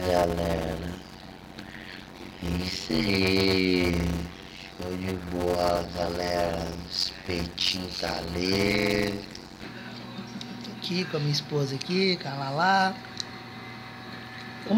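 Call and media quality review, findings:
Steady buzz near 92 Hz, audio dragged to 0.533x speed at roughly normal pitch, 0.0–9.6 s. Block size mismatch (padded) between buffer stages: fits 256-sample writes into 480-sample reads, zero-filled tail gapping every block.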